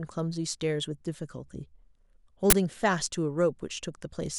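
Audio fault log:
2.50–2.53 s, uninitialised buffer: a harsh, loud burst of digital noise lasts for about 23 ms. A block got played before any audio was written to it, so leftover memory came out as samples; the length fits a 1024-sample buffer.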